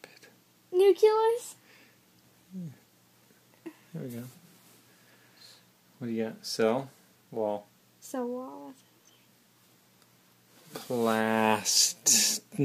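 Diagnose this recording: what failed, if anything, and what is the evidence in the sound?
Nothing in this recording points to a failure at any stage, so there's no fault to diagnose here.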